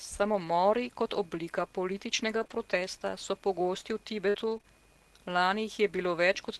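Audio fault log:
0.31–4.65 s scattered short gaps: about five packets were lost or arrived late across this stretch, the longest roughly 50 ms. The receiver filled each hole by stretching the preceding sound forward, so the speech carries brief ticks, smears and small hiccups.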